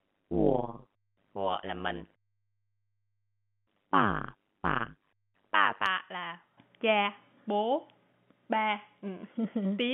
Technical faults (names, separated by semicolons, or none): overlap-add ripple